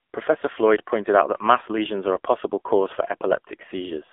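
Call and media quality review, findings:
AMR narrowband mobile codec, whole clip. Speech band-limited to 300 Hz–3.5 kHz, nothing above 3.7 kHz. Heavy buzzy, synthetic timbre from a sparse-pulse vocal-tract model, which fits a low AMR-NB mode near 6.7 kbps. Probable component: mobile network leg.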